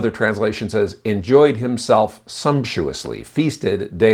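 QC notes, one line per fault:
No faults heard anywhere in the speech recording.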